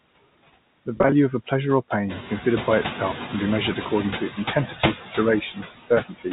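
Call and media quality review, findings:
Noise suppressor artifacts, throughout: suppressor pulling steady-noise bands down by about 17 dB frame by frame. Background dips between phrases and swells under them, leaving a fluttery, warbling residue, most exposed once room noise climbs about 13 dB near 2 s.

Packet loss with pitch repetition, 0.96–1.12 s, just before "of a pleasure or": jitter buffer/concealment repeating the last pitch period across brief gaps. Runs of 20 ms or less, about 80 ms lost over 160 ms. Sounds like short, held, buzzy stutters.

Speech cut by the noise suppressor, 4.55–4.96 s, after "measured according to its": suppressor misclassifying soft speech as noise. Roughly 150 ms attenuated, up to about 10 dB. Sounds swallowed, faint.

Speech cut by the noise suppressor, 5.41–6.27 s: same misclassification, deeper. Around 400 ms of speech pulled down by up to about 18 dB. 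Speech turns faint.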